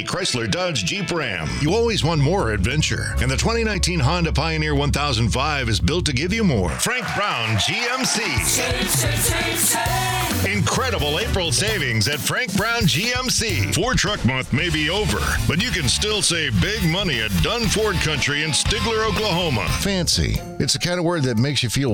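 There are periodic USB or driver dropouts here: from 1.69 s to 6.82 s, about seven regular ticks land every 1.02 s. Each is a gap of a few milliseconds filled with silence, where something briefly stalled the USB bus or the audio driver.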